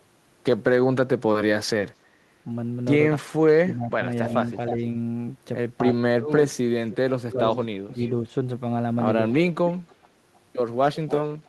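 Speech with two recurring faults. Speech suppressed in double talk appears from 3.2 to 4.75 s and from 5.93 to 7.99 s: the level dips by up to about 30 dB and then about 15 dB, roughly half a second in each span, visible as notches in the waveform envelope and faded bands on a spectrogram, likely an echo canceller turning down its own talker along with the loudspeaker echo. Echo leak runs from 3.73 to 4.73 s, 5.94 to 8.1 s and 9.33 s to the end, a copy delayed about 0.31 s at roughly 10 to 20 dB below the speech. On a spectrogram it shows as faint repeated harmonic patterns trailing the originals, likely loudspeaker pickup the canceller failed to remove.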